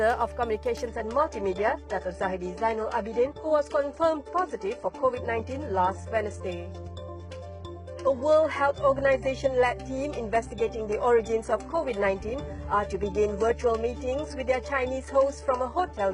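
At 0.87 s the quality suddenly drops and stays down right through to the end at 16.13 s. There's no gap at the switch, just an abrupt step, which is the signature of an adaptive stream at a lower bitrate kicking in when the connection slowed. Above 11 kHz there's nothing at all, and the top end sounds thin. That fits a jump from a decent AAC stream down to a very low-rate HE-AAC one.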